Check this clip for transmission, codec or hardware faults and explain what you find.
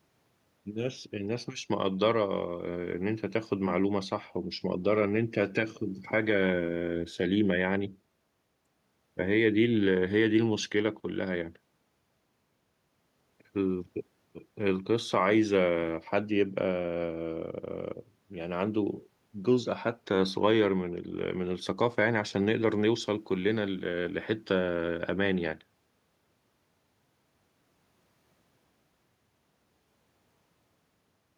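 The speech signal is technically intact throughout, with nothing audible that points to a fault anywhere along its path.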